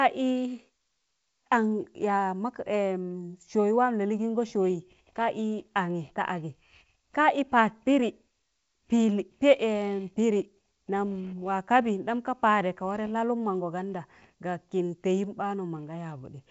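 No technical fault is heard in this speech recording; it carries the band-limited, lightly hissy character of G.722 wideband telephone coding, which sounds consistent with its full 64 kbit/s mode.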